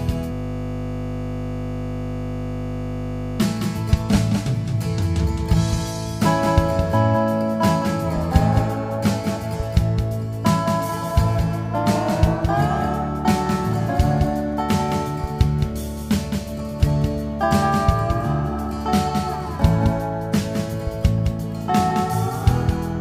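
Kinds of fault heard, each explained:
Doubled audio track: A second copy of the whole audio runs alongside the first, trailing it by about a fifth of a second. The copy is full-band and about 5 dB quieter than the original. It carries no decay or room colour, so it reads as a flat, detached repeat rather than an echo. It is present for the entire clip. The likely cause is the same signal being captured again through a slower path.
System hang loop: From 0.33 to 3.40 s, one 20 ms slice of audio repeats exactly, about 150 times in a row. The computer or driver stalled while the sound hardware kept replaying the same ring buffer. Because the looped piece is so short, it fuses into a steady buzz at 50 Hz. That buzz replaces the real audio for just over three seconds, then normal playback resumes.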